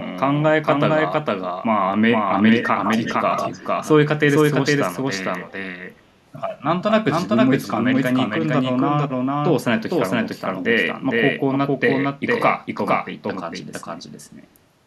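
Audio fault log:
throughout, doubled audio track: The speech was likely captured twice, with the second copy arriving by a slower route about half a second behind. Since it is roughly as loud as the original, every syllable is heard again, dry and full-band, with no room tail.
2.61 to 2.67 s and 2.84 to 3.67 s, echo leak: The far side's echo canceller likely let loudspeaker pickup through and sent it back. A copy of the speech trails 144 ms behind, first as a brief scrap about 10 dB down, then a longer stretch about 5 dB down.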